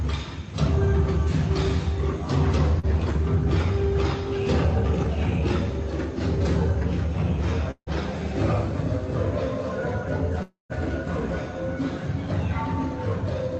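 Audio carried over a call link, where a few hundredths of a second of packets failed to reach the decoder in time, is a case of short concealed packet loss at 2.79 to 2.86 s. The receiver bridged the roughly 40 ms gap by extending the preceding sound for about 36 ms before blending back into the real signal, so that moment comes across as a brief smear or wobble instead of a clean continuation. Two longer gaps, at 7.71 to 7.89 s and 10.42 to 10.72 s, are likely long network dropouts, with roughly 160 ms and 280 ms of audio never played. In each, the last sound is stretched into a fading buzz or hiss, about 150 ms in the first gap and about 270 ms in the second. That fill then gives way to dead air, and the audio resumes further on with that stretch missing. Throughout, the call codec adds its usual coding noise and the top end stops at about 8 kHz, which fits a compressed call codec.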